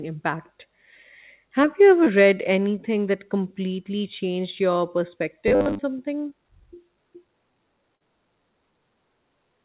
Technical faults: short concealed packet loss; robotic sound from repeated short buffers; burst of packet loss

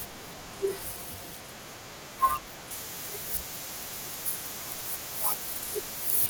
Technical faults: pre-emphasis left on

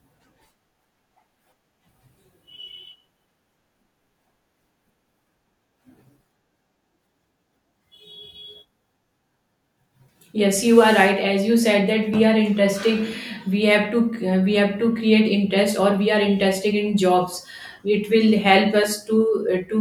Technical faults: dropped buffer (overrun)

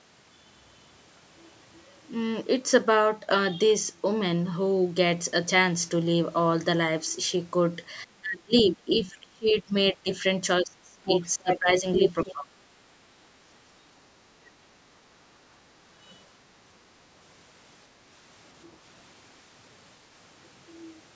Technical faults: speech suppressed in double talk; other side's voice leaking through

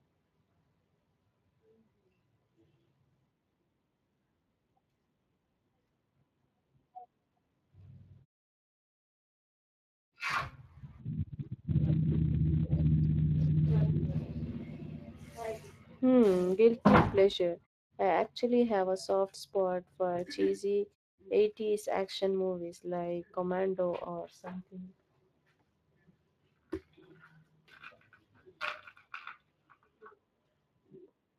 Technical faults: Speex codec

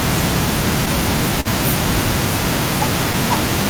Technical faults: clock drift between sender and receiver; short stall from a late packet

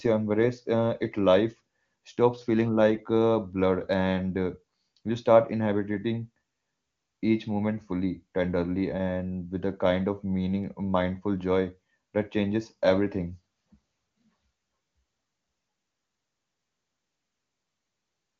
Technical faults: none

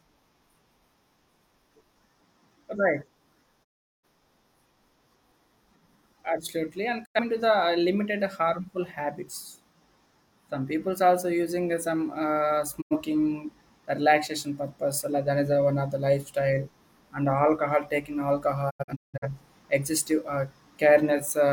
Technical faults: digital broadcast dropout

